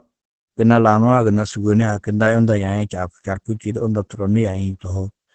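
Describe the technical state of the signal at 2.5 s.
At 2.5 s the speech carries Opus voice compression, present throughout the clip. Heavy SILK linear-prediction coding leaves it muffled, hoarse and faintly robotic, which fits a bitrate near 10 kbps. A spectrogram shows a flat ceiling at 8.6 kHz with coarse, smeared harmonics beneath it.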